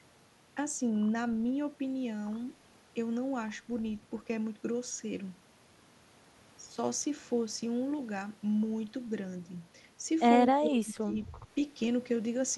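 Speech, with speech suppressed in double talk from 10.59 to 11.18 s: the voice sinks by roughly 20 dB, likely an echo canceller ducking this talker while the far end spoke. Unlike a network dropout, it dips rather than falling to clean silence.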